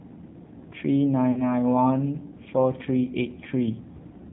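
Throughout, the speech has passed through the AMR narrowband mobile codec, which samples at 8 kHz and rebuilds the voice from a vocal tract model excited by a few pulses per subframe. Nothing above 4 kHz survives, so the sound is boxed-in and dull. At this low operating point, which fits AMR-NB at around 7.4 kbps, the damage is plainly audible: voiced sounds take on a buzzy, synthetic edge.

From 1.32 to 1.43 s, lost AMR speech frames break the signal. Frames failed to arrive intact, and about 40 ms of audio, consistent with two consecutive 20 ms frames, had to be concealed. The decoder carried forward the last good pitch and vocal tract settings while lowering the gain. The result is a short smeared, warbling stretch that sags in level before normal decoding resumes, with the sound briefly weak or rough as it recovers.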